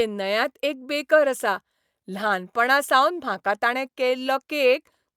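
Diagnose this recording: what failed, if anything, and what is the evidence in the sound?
Nothing failed in this speech recording, and no stage of the chain leaves an audible mark. With no event in the sound pointing to a problem, there is nothing to diagnose.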